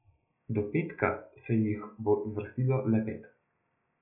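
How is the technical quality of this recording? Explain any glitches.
No technical glitches can be heard in this speech recording. Nothing interrupts or alters the sound at any point, so there is nothing to explain.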